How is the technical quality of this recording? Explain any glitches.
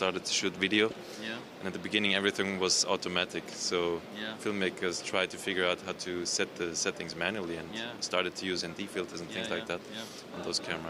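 The recording has one recurring glitch. Clock drift buffer slips: from 1.76 to 10.69 s, about seven regular clicks arrive every 1.78 s, likely from two unsynchronised clocks dropping or repeating around 50 samples, which fits roughly 500 ppm mismatch.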